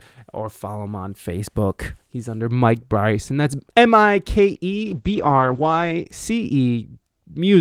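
From 4.73 s to 6.11 s there is a call bitrate drop. The encoder falls from 32 kbps to 10 kbps and holds the low rate for about 1.2 s. Audio bandwidth narrows from 20 kHz to 8 kHz, so the speech sounds muffled and coarse until the bitrate recovers.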